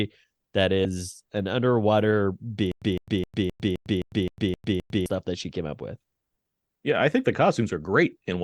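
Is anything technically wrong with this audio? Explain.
Yes. At 0.85 s, just before "an underwater", compressed frames were skipped: a few whole frames were never decoded, dropping roughly a tenth of a second of speech, which fits three 32 ms frames.

From 2.72 to 5.06 s, between "an underwater" and "that she came up", there is a stutter with silent gaps, likely from a stalled player or stream replaying its last fragment on each retry. A 158 ms burst repeats nine times, separated by 102 ms of digital silence at a steady 261 ms rhythm, and the speech in that span is lost.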